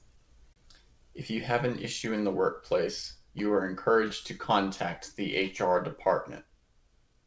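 Clock drift between sender and receiver runs through the whole clip: the sender's clock is a few percent slow, so the receiver's jitter buffer keeps draining and has to be topped up. The result is small, unevenly spaced timing hiccups rather than one obvious break.

A short stall from a late packet comes first, at 0.53 to 0.58 s. The buffer ran dry when a packet was due, so the receiver held the last sound for about 30 ms until it arrived, then resumed with nothing lost, leaving a brief sustained, slightly buzzy smear.

Repeated timing corrections follow from 0.80 to 6.84 s. To keep pace with the slow sender, the receiver repeats short slices and plays the audio at about 98% speed, adding roughly 150 ms overall. The sound drags faintly, with an unsteady tempo and occasional tiny stutters, all within a G.722 call path that leaves nothing above 8 kHz.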